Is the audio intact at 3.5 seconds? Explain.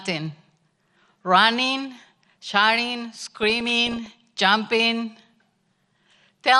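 No. At 3.5 seconds the audio is inside a burst of DAB burbling that runs from about 3.43 to 4.06 s, starting just after "running shouting". Bit errors in the received stream slipped past error correction and corrupted the coded audio. Wrong samples put short blips of noise in single sub-bands, and wrong scale factors make sub-bands jump in level for up to a frame. The error rate sounds like roughly a third of a percent. The result is a burst of burbling noise on top of the speech.

Under that burst, and through the whole clip, there is MP2 compression damage. The sound is dull and has a gurgling, granular roughness. MPEG Layer II splits the audio into 32 sub-bands and shares a limited bit budget among them. Short of bits, it shuts off upper bands and quantises the remaining ones coarsely. The damage is plainly audible and fits a low rate of around 80 kbps. That low rate is the likely cause of the dullness.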